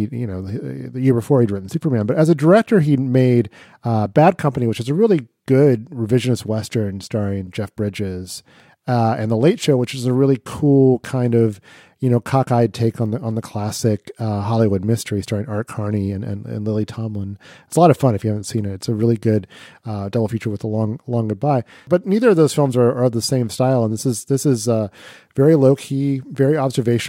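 No technical faults can be heard anywhere in this speech recording. Nothing in the signal calls for comment at any point.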